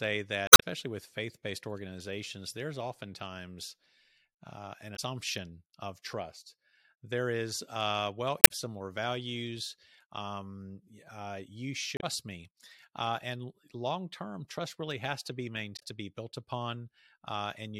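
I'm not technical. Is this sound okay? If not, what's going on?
No. The recording has damaged data in a compressed stream: parts of the stored file are corrupted. At those spots the player can't read the audio correctly, loses its place and jumps ahead to the next readable chunk. You hear short chirps or blips at 0.46–0.63 s (just before "with faith based organizations"), 4.93–5.00 s (after "uh an"), 8.40–8.51 s (between "is uh well" and "similar values um uh"), 11.97–12.04 s and 15.76–15.82 s.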